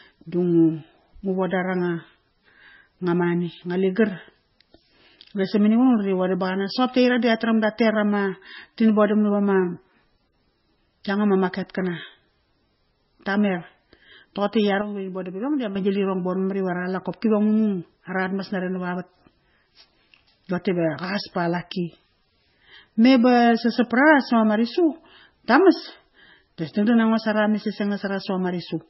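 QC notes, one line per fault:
throughout: MP3 compression. The treble stops dead at about 5.6 kHz, and weak spectral detail flickers in and out between frames, giving a watery, swirly texture with chirpy sibilants. The heavy damage fits a very low bitrate near 17 kbps. A plain low-pass filter would cut the treble without this warbling.
14.81–15.76 s: sudden gain jump. The speech and the background noise both drop by about 8 dB at the same instant, with no ramp, and come back just as abruptly. The likely cause is a level change applied without smoothing. A fade or a compressor would move gradually.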